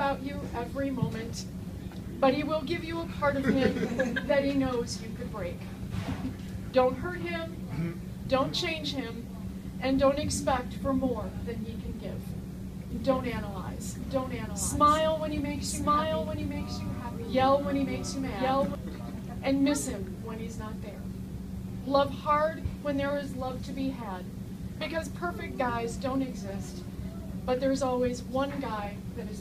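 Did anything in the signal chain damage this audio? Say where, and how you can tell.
Yes: a doubled audio track runs from 12.91 to 18.75 s, where a second full-band copy trails about a second behind, a few dB quieter, with no decay or room colour and abrupt edges. It is likely a second, slower capture path or an edit mixing in an offset duplicate.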